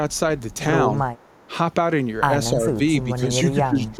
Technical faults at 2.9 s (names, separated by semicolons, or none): speech suppressed in double talk; echo leak